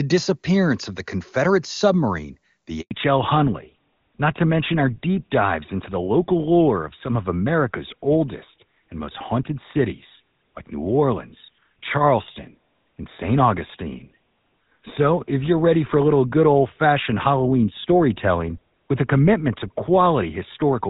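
At 2.81 s, just after "submarine the", there is a handover gap. The call switched networks and no speech frames arrived for 100 ms. The sound fades out within a few tens of milliseconds and stays silent until 2.91 s. Whatever was said then is gone.

From 2.91 s to the end comes a fallback to narrowband. Before it, the audio has the clear, wide band of HD Voice, consistent with AMR-WB at a high rate. Afterwards nothing above 4 kHz remains. The speech sounds duller and rougher, which fits an older GSM full-rate codec.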